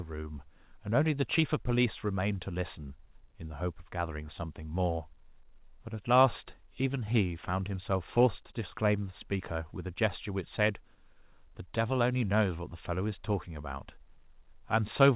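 No technical faults can be heard in this audio.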